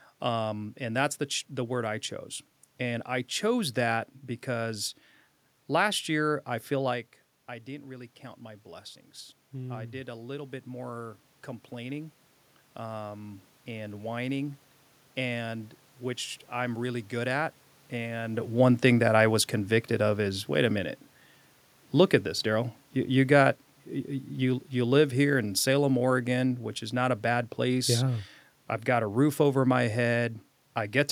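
From 7.65 to 18.28 s, automatic gain rising: the level at the microphone dropped by about 12 dB as the talker moved back from the microphone at around 7 s, and the gain control slowly raised its gain by about 10 dB to compensate. The speech and the room noise swell together over those ten seconds instead of the speech alone coming back up.

From 24.77 to 30.27 s, automatic gain falling: the gain control judged the input too loud, or its background noise too strong, and pulled its gain down by about 4 dB over roughly five seconds. The speech starts that stretch loud and then gradually sinks, with the room noise fading down alongside it.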